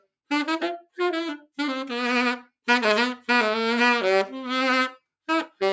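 Nothing here counts as a technical fault; the sound has simply passed through a call's microphone processing, so the lowest bass is trimmed and nothing reaches above 8 kHz, which is just how that path normally behaves.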